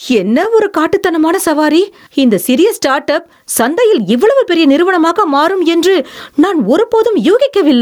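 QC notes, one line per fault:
throughout: gain pumping. The gain swings by around 15 dB, likely from input gain set far too high with a fast limiter pulling it down. Unlike ordinary level drift, the breathing tracks the speech.
0.43–0.45 s: chunks out of order. A 10 ms piece of audio plays one chunk late, after the piece that should follow it, leaving three hard joins and a brief jumbled flicker. Nothing is missing, which sets it apart from a dropout.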